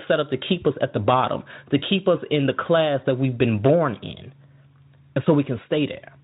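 Speech, carried through a Speex codec whose coding damage is faint at most, with no technical faults to report.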